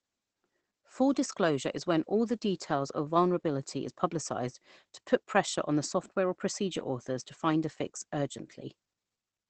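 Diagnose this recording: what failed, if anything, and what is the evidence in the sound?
The codec stage is the culprit: this is Opus voice compression, and it's plainly audible across the whole clip. The speech sounds muffled and a bit hoarse, with a faintly robotic edge. That fits Opus running its SILK linear-prediction coder in wideband, which drops everything above about 8 kHz, at a low bitrate, something like 12 kbps. At that rate the excitation is coded coarsely, likely in 20 ms frames, so the fine texture of the voice gets smeared.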